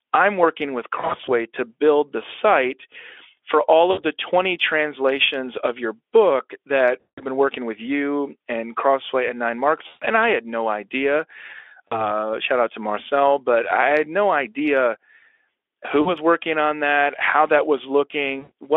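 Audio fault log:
0.99–1.30, 3.91–4.05, 7.00–7.26, 9.87–10.06, 11.88–12.06, 16.01–16.13 and 18.39–18.52 s, VoIP packet loss concealed by the speech codec: brief stretches of smeared buzzy tone or coloured noise that fade, with the speech weak or distorted for a moment as audio resumes. Lost stretches total 40 to 180 ms per event, scattered across 280 ms in the first. The narrowband Speex decoder replays its last pitch and filter at falling gain, and its frame-to-frame memory prolongs the damage.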